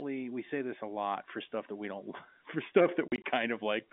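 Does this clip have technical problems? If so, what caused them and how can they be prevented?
Yes. Packet loss filled with silence, 3.08 to 3.24 s: about 80 ms of the speech drops to hard-edged gaps, the longest 40 ms, consistent with lost 20 ms packets. Packet loss concealment at the receiver and a steadier network path or jitter buffer would prevent it.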